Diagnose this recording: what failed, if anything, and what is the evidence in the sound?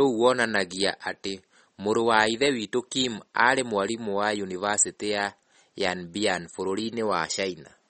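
MP3 compression throughout, codec stage: the speech has plainly audible codec damage and nothing above 8.4 kHz, likely from a starved encoder at a low bitrate, around 32 kbps.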